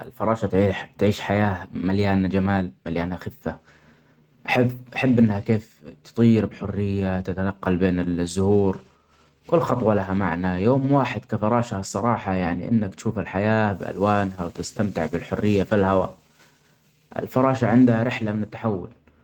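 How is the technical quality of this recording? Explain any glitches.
The technical quality of this recording is sound, with no glitches to explain.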